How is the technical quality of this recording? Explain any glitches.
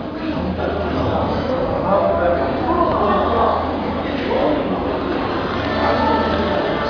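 No technical faults are audible anywhere in the recording, so there are no glitches to explain.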